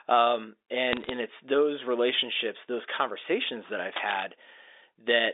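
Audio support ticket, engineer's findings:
Bit errors on a digital phone line, 0.92 to 1.09 s: sharp ticks and crackle over the speech, flipped bits hitting single samples on the G.711 link, roughly half a percent error rate.

Cable scratch noise, 3.96 to 4.24 s: uneven rustling burst nearly as loud as the speech, likely a worn cable or connector moving and jittering the contact resistance, on top of the 300 Hz to 3.7 kHz phone band.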